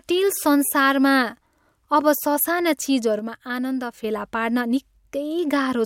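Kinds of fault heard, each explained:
One channel drops out: from 3.19 s to 4.04 s the speech falls abruptly by about 6 dB and then jumps back to full level. The likely cause is one side of a stereo signal going silent before the two are summed to mono, leaving only the surviving channel's half. A fade or gain change would ramp gradually and land at an arbitrary level. Here both edges are instant steps, and the dip sits at half amplitude.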